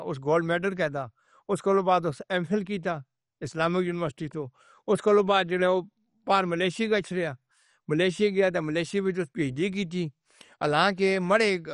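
Throughout the speech, the sound is dull and gurgling, with a granular roughness. Nothing reaches above 11.3 kHz. Upper sub-bands drop out and flicker back. This points to MP2 compression as the likely cause, at a low rate around 48 kbps.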